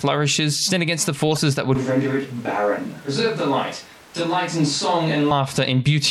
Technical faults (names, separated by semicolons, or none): corrupt frame decoded; switch to a distant microphone